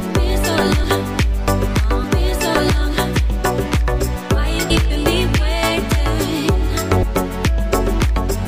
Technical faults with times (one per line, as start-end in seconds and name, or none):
0.83 compressed frames skipped
3.15 compressed frames skipped
4.69 compressed frames skipped
7.02 compressed frames skipped